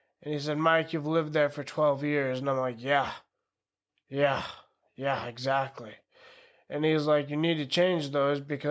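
A speech recording with no technical faults to report.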